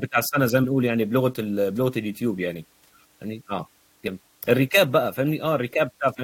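Damaged data in a compressed stream appears twice in this speech: a stretch of the encoded bitstream arrived corrupted, so the decoder misread the affected frames and lost sync until it found a valid frame header again. Each event lasts about 20 ms, from 0.63 to 0.65 s and again from 4.07 to 4.09 s. Each one is heard as a brief, harsh chirp or blip cutting into the speech before normal decoding resumes.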